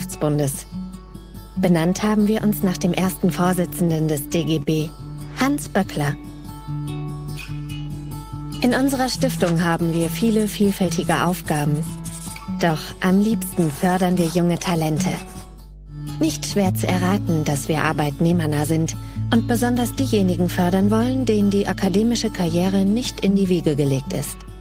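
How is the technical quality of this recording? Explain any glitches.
The technical quality is compromised by a strong, constant hum, and there are three short network-related glitches.

Mains hum runs through the whole clip: a steady 50 Hz tone at about -10 dB relative to the signal, so it is clearly audible under everything. A ground loop or a nearby transformer is coupling the power line into the signal path, adding this low drone and its low harmonics.

Scattered short gaps occur between 3.41 and 4.15 s. Around seven packets went missing or arrived late, each concealed by continuing the preceding sound. The longest patch is roughly 15 ms, totalling about 50 ms, heard as brief ticks and small smears.

A short stall from a late packet follows at 4.63–4.69 s. A packet was not there when it was due, so the jitter buffer ran dry and the receiver held the last sound for 42 ms until it arrived. 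Nothing is lost, but that moment hangs slightly with a slight buzz or dip.

A jitter buffer speed-up occurs from 22.96 to 23.51 s. The buffer had built up excess delay, so the receiver trimmed short pitch-period slices repeatedly, removing roughly 40 ms. Playback runs at 106% speed with unchanged pitch, sounding briefly hurried.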